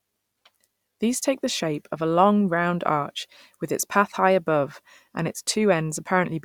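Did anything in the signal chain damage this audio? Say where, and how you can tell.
No, nothing audible in this speech points to damage at any stage of the chain, so there is nothing to locate.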